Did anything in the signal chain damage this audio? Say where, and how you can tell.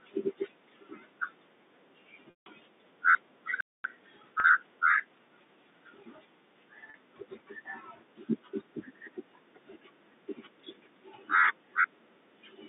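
Yes, and it's at the network and playback end rather than the line itself. The narrowband telephone character, roughly 200 Hz to 3.7 kHz, is just the G.711 link doing its job. The first problem is packet loss with pitch repetition. At 2.30 to 2.46 s there's a 160 ms hole, which fits eight 20 ms packets going missing. The receiver keeps replaying the last pitch cycle, so you hear a held, buzzy tone that fades out before the speech cross-fades back in. Shorter versions of the same thing hit at 4.40 s and 6.90 s, each about 40 ms, and there they come across as a brief buzzy hold.

At 3.61 s the sound just cuts out mid-flow and stays silent for about 240 ms, until 3.84 s. That's a playback stall. The output had nothing to play for that stretch, most likely because the player's buffer ran dry. When it picks up again there's no pitch repetition in the gap, only a clean silence, which is how you can tell it apart from the concealed losses.

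Right after the stall, from 3.84 to 6.20 s, the audio runs hurried at about 1.1x, though the pitch stays where it should be. That's time-compressed catch-up. The player works off its backlog by snipping out small slices and cross-fading over the joins. The 40 ms loss at 4.40 s lands inside this section, so there the buzzy hold sits on top of the rushed audio.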